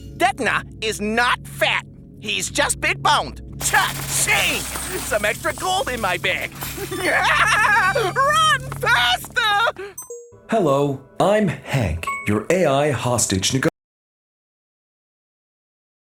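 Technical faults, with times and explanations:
13.69 s to the end: audio dropout to silence. The sound cuts off mid-flow and the last 2.3 s are silent, with no room tone or noise floor at all. This is most likely a lost input, such as a disconnected device, failed link or stray mute, while recording continued.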